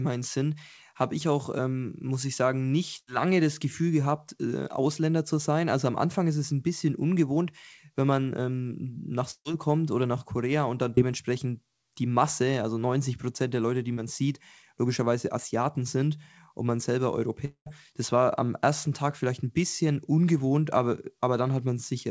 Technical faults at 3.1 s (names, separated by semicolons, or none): burst of packet loss